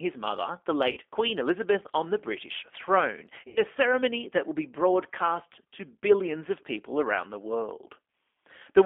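The whole clip runs through the G.729 codec. Speech is squeezed into a band near 250 Hz to 3.5 kHz and sounds plainly rough and synthetic.

At 0.91 s, VoIP packet loss concealed by the speech codec begins. About 60 ms of audio is missing, which fits three lost packets. The decoder stretches the last sound into a buzzy tone or coloured noise that fades until 0.99 s. At 3.48 s it happens again. About 80 ms is lost, fitting four packets, and the stretched, weakened sound lasts until 3.61 s.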